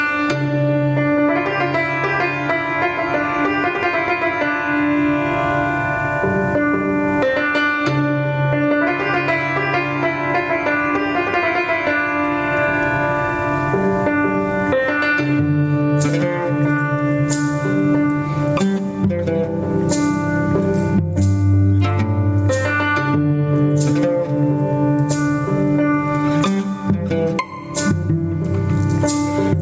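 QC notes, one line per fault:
Throughout, gain pumping: the gain swings by around 20 dB. That's likely input gain set way too hot with a fast limiter clamping down each time, so everything sounds squashed and flattened in level.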